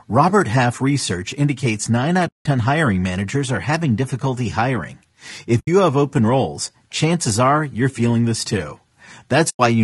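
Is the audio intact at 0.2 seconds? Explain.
No, the speech sounds rough and grainy there and throughout, with noise between harmonics, likely low-delay AAC compression whose short frames, at a rate suggesting about 32 kbps, smear pitch detail.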